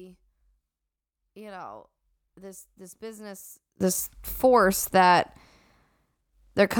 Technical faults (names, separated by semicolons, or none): one channel inverted